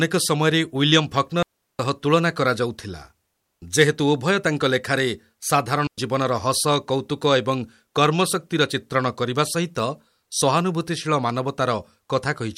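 Speech cut by two clean holes of near silence, 1.43 to 1.79 s and 5.87 to 5.98 s, with no noise burst: a digital wireless dropout, the receiver muting after losing data.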